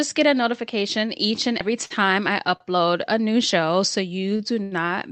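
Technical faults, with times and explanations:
1.61 s, audio missing between chunks: a skip with roughly a tenth of a second of speech gone and the two sides butted together without silence. This likely comes from the recording being handled in 2-second chunks, with material lost at the handover.
1.85–1.92 s, 2.56–2.62 s, 4.36–4.41 s and 4.63–4.73 s, short stall from a late packet: the jitter buffer ran dry, so the last sound was held for 48, 41, 28 and 82 ms before resuming where it left off. Nothing is lost, but the held sound drags with a slight buzz or dip.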